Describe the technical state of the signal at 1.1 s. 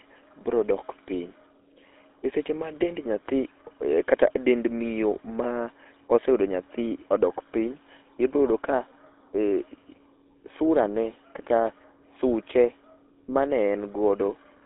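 At 1.1 s the speech carries GSM full-rate codec damage, present across the whole clip rather than at that moment alone. The codec rebuilds the voice from a vocal-tract model driven by sparse, regularly spaced pulses, so the sound is plainly buzzy and gravelly, consistent with a 13 kbps full-rate link. A spectrogram shows a hard ceiling near 3.9 kHz with nothing above, energy confined to roughly 250 Hz to 3.7 kHz, and a smeared, pulse-combed harmonic structure.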